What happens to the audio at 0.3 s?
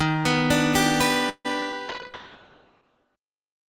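Nothing goes wrong at 0.3 s; the audio runs on intact through that moment, with no dropout, click, distortion or other fault to be heard.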